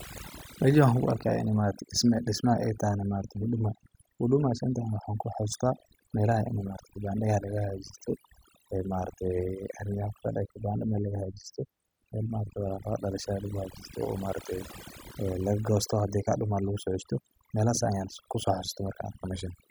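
Overdone noise removal runs through the whole recording. The noise reduction was set too strong. Frequency bands near the noise estimate are pulled down or cut out, and quiet parts of the speech vanish too. Gaps fall to near silence with twinkling specks.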